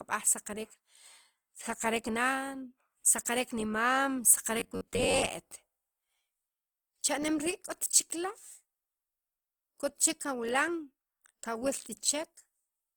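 Opus compression runs throughout, likely in its music mode at a rate fitting about 24 kbps. Starved bands are refilled with noise, leaving the speech grainy and rough.

Robotic sound from repeated short buffers follows from 4.60 to 5.29 s. A snippet of about 10.7 ms, likely a delayed buffer, repeats over roughly two fifths of that span, forcing a rigid metallic 93.8 Hz buzz.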